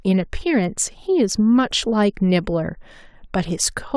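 No audible technical faults.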